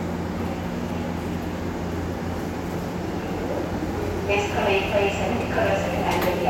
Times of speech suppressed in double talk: none

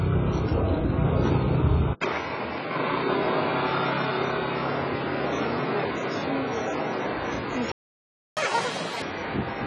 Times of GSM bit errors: none

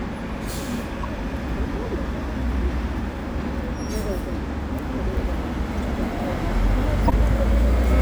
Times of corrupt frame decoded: 1.03-1.05, 3.92, 5.82, 7.08-7.12

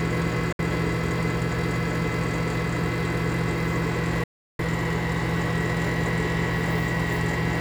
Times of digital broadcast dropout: 0.52-0.59, 4.24-4.59

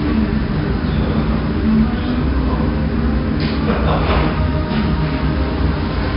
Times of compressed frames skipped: none

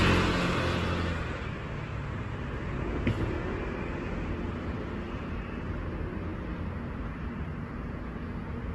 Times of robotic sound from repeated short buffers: none

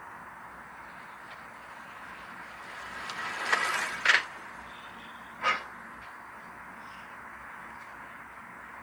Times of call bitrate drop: none

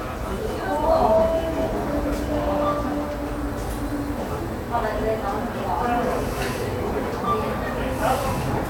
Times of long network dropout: none

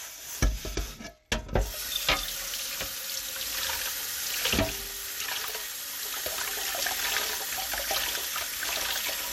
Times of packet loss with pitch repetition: none

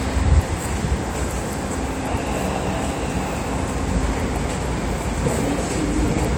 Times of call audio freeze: none

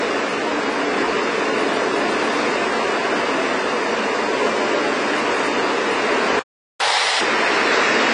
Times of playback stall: 6.39-6.80

